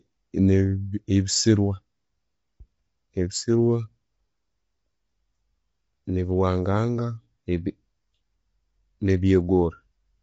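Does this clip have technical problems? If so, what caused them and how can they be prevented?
Yes. The whole clip sounds rough and grainy, likely from low-delay AAC compression starved of bits; a spectrogram shows noise between harmonics and nothing above 7.8 kHz. Giving the encoder a higher bitrate than the roughly 24 kbps this sound points to would prevent it.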